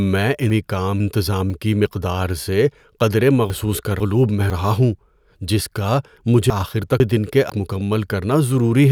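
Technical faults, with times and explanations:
0.5–1.5 s, 3.5–4.5 s and 6.5–7.5 s, chunks out of order: each second sounds jumbled, just before "کی مقدار سے قدرے" and between it and "رہا ہوں". A 500 ms chunk played one chunk late, after the one that should follow it, so the sound is reordered but nothing is lost.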